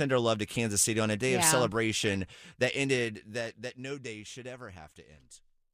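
Speech, with a short burst of DAB burbling from 2.04 to 2.14 s: short blips of noise in single sub-bands. It points to weak reception, with a small residual bit error rate slipping past error correction and corrupting MP2 samples and scale factors.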